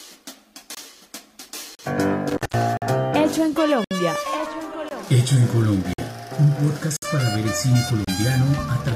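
The first gap between stream segments opens at 0.75 s, and the next at 1.75 s. Each is a hard-edged hole of silence. At 2.29 s an intermittent contact begins, lasting until 2.63 s. A loose connection opens for about 170 ms in that span. The sound drops out with crackle at each edge, and faint hiss remains while the line is open. The stream gaps then return at 2.77, 3.84, 4.89, 5.93, 6.97 and 8.05 s. They fall about once per second, at the joins between one-second segments. Their time stamps leave space the player fills with silence. The holes last between 20 and 65 ms. Nothing is lost. The sound just stops briefly, then resumes.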